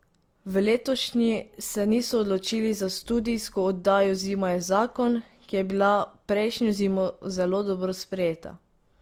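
All the way through this speech you can hear two different flavours of compression smeared together, which sounds like transcoding between lossy codecs. There's the artefact texture of one stage, and on top of that the added artefacts of a second. The mix points to something like HE-AAC followed by Opus at a modest bitrate, likely, with the second encoder spending bits re-coding the first one's artefacts. The top end stops at around 20.3 kHz.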